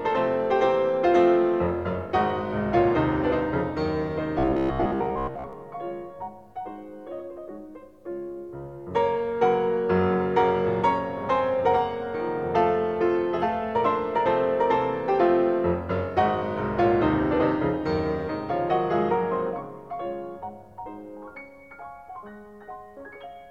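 From 4.39 to 5.53 s the sound turns into robotic sound from repeated short buffers: a rigid metallic buzz near 66.7 Hz, likely from a 15 ms block being looped while most of the real audio is skipped. Unlike dropouts, there is no silence.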